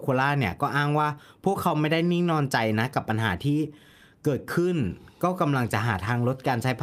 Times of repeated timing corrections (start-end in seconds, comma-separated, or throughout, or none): 0.64-6.76